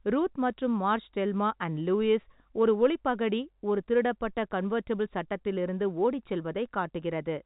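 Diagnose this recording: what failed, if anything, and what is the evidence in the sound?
Nothing has failed: the speech comes through a telephone-band path that sounds like G.711 A-law coding, with no content above 4 kHz and at most a faint quantisation noise that rises and falls with the signal's level, which is the normal character of that format rather than a fault.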